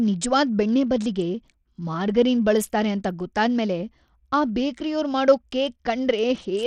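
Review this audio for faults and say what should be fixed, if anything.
Throughout the speech, treble flickers and drops out under a gritty, aliased haze, likely Bluetooth SBC compression starved of bits, which fits roughly 80 kbps. To prevent it, record over a wired link or a higher-bitpool codec.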